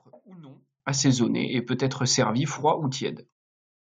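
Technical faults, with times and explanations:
0.0–0.8 s, one channel inverted: the speech falls by about 24 dB to a faint residue before "assaisonné et peut être", likely from reversed polarity cancelling centred content when summed to mono.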